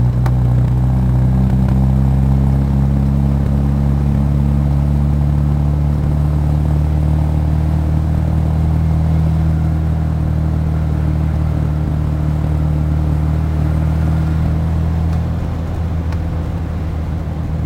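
Throughout, there's imaging from sample-and-hold upsampling: 22 kHz audio stretched to 48 kHz by repeating samples, leaving a metallic fizz between 11 kHz and 22 kHz, about 38 dB down.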